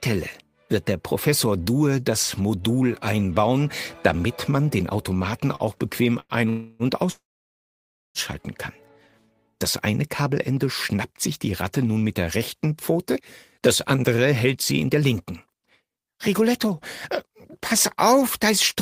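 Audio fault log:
5.55–5.63 s and 6.20–6.32 s, short stall from a late packet: sound held about 43 ms and 98 ms awaiting data, shown as smeared, stretched harmonics on a spectrogram.
6.49–6.83 s and 7.12–8.18 s, call audio freeze: likely delayed packets. Sound becomes a fading buzz for 0.3 s, then about 0.94 s of flat silence in the second, a blank spectrogram band.
12.93–18.76 s, jitter buffer speed-up: pitch-period snippets trimmed repeatedly, around 0.4 s in total, so audio runs at 106% speed at unchanged pitch, with compressed waveform spacing.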